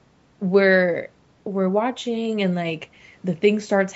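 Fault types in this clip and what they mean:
There are no fault types in this clip, so there is nothing to explain about what they mean.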